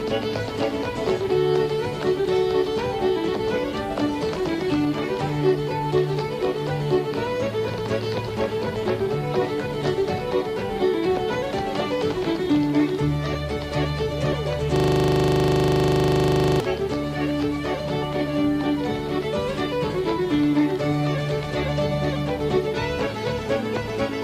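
A system hang loop runs from 14.76 to 16.60 s: one 40 ms fragment of the audio repeats about 46 times, a rapid 25 Hz rattle, as the hardware cycled a stalled buffer.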